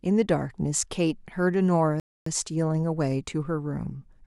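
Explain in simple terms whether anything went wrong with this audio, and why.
A rebuffering stall interrupts the speech at 2.00 seconds. For about a quarter of a second, until 2.26 seconds, there is only silence, and then the speech picks up again at exactly the point where it stopped. The player had run out of downloaded audio and had to pause until more arrived. None of the speech is skipped or lost. The stall simply adds about 0.26 seconds of dead air.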